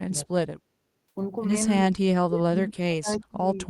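The speech dips sharply from 0.06 to 0.43 s, falling by about 30 dB for a fifth of a second in all. It returns, then drops again from 1.86 to 3.58 s, now by about 40 dB, and stays lost for about one and a half seconds. The sound fades. This is likely speech suppressed in double talk: with both ends talking, the echo canceller mistook this talker for echo and pulled the level down.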